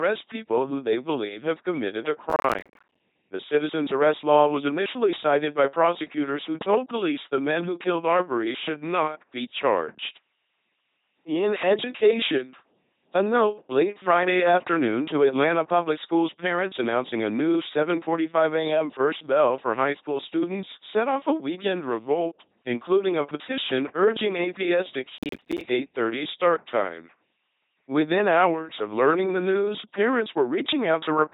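From the start, the speech passes through an LPC-10 vocoder at 2.4 kbit/s. Each moment is rendered as either pulse-driven buzz or noise, which gives it a heavy robotic quality with nothing above 3.9 kHz. From 2.30 to 3.00 s and again from 25.18 to 25.61 s there is processor overload crackle. Audio buffers of about 10 ms miss their deadlines and drop to silence, and the result is a burst of gritty tearing.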